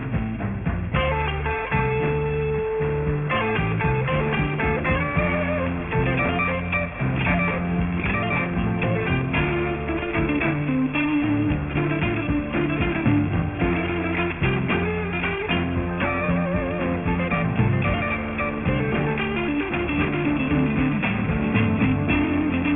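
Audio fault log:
Throughout, aliasing: the audio sounds as if it was cut down to a 6 kHz sample rate without an anti-alias filter, so everything above 3 kHz folds back below that edge at wrong, unrelated pitches, roughly 10 dB under the wanted signal. Bright content turns gritty and metallic, and energy crowds hard against 3 kHz. A clean low-pass would only dull the top. Here the folded tones are extra sounds that don't belong to the source.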